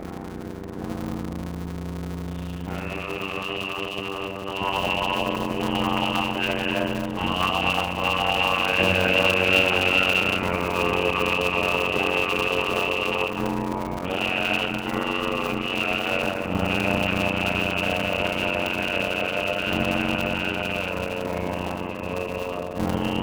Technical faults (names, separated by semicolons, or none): block size mismatch (padded); skip ahead